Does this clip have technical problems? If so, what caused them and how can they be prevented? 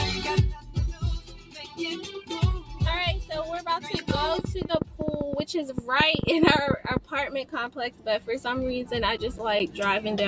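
Yes. A noise suppressor designed for speech was left active on this sound. It treats sustained tones, ambience and decay as noise, so the level swings by about 10 dB throughout, with held parts sinking while attacks pass, and the sound pumps and thins. To prevent this, disable speech noise suppression, or use a music mode, when sending anything other than speech.

In four places the suppressor clamped down harder: 0.58 to 0.76 s (about 9 dB), 1.2 to 1.79 s (about 10 dB), 4.83 to 5.0 s (about 9 dB) and 7.69 to 8.28 s (about 11 dB). Sustained or fading material dips or has its tail cut short there. The same fix applies: switch the suppressor off for non-speech sources.

From 3.94 to 6.98 s a train of clicks runs over the sound, about 30 pulses of similar shape at an irregular pace averaging around 10.6 per second, standing roughly 20 dB above the signal. Such a train likely comes from interference from nearby equipment, a faulty connection or a faulty power supply, injecting repeated pulses. 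Check cables and connectors, and keep the recording chain away from noisy equipment and unstable supplies.

Between 8.97 and 9.80 s there are five CD scratch ticks. A scratch or blemish on the disc destroys more data than error correction can rebuild on each rotation, so the player interpolates or mutes the damaged samples. The result is brief ticks or tiny gaps, the longest around 10 ms. Clean or replace the disc, or rip it with a secure-mode ripper that re-reads damaged sectors.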